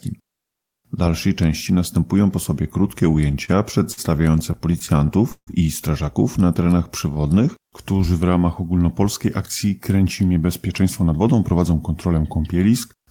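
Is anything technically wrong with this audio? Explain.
Yes, the audio has three kinds of timing fault.

Repeated stalls (stutter) occur from 3.31 to 4.00 s and from 4.39 to 5.50 s. Packets arrived late, so the jitter buffer ran dry 5 and then 9 times. The receiver stretched the last sound to fill 118 ms and 239 ms, with gaps up to 150 ms. Nothing is lost, but the sound drags and stutters.

A jitter buffer slow-down runs from 6.44 to 8.02 s. To rebuild its reserve, the receiver repeated single pitch periods and slivers of pauses, adding 150 ms. Playback drops to 91% speed at unchanged pitch, so sounds are drawn out.

A jitter buffer speed-up runs from 9.93 to 12.19 s. The buffer held too much audio, so the receiver cut short pitch-period pieces, about 0.3 s in total. Playback rises to 112% speed at the same pitch and sounds hurried.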